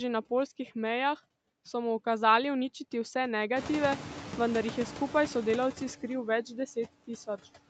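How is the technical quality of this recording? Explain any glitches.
The recording has one ongoing processing fault: noise suppressor artifacts throughout. The suppressor cuts bands it judges to be steady noise by about 14 dB per frame, so the noise sinks between words and rises under them, and a spectrogram shows flickering, patchy gaps between syllables. Room noise rises roughly at 3.5 s, and energy stops near 8 kHz, as expected on a call line.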